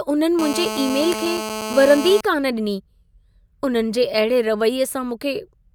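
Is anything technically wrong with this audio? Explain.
Yes. From 0.39 to 2.21 s a hard, raspy buzz at about 217 Hz, rich in harmonics and only about 8 dB below the speech, sits steadily under it: GSM phone buzz, where a nearby 2G handset on a call transmits bursts that the audio circuitry rectifies.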